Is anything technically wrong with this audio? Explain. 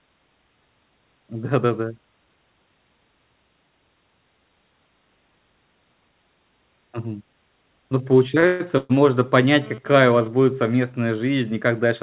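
Yes, there are three kinds of fault, all in the second half of this speech.

From 8.40 to 8.44 s there is a short stall from a late packet: one sound is held about 24 ms too long with a slight buzz or dip. A packet missed its slot, so the receiver stretched the last sound until it arrived.

At 8.46 to 8.62 s and again at 8.78 to 8.99 s there are call audio freezes. The sound turns into a fading buzz or hiss lasting roughly 0.13 s and 0.12 s, never dropping to silence, then resumes where it stopped. The likely cause is delayed packets draining the jitter buffer.

From 9.62 to 10.28 s, just before "будет совместная", there is GSM phone buzz. A hard, raspy 217 Hz buzz sits about 20 dB below the speech and comes and goes. A nearby 2G phone transferring data is bursting radio pulses that the audio circuit rectifies.

All of this passes through a G.711 call path, which leaves nothing above 4 kHz.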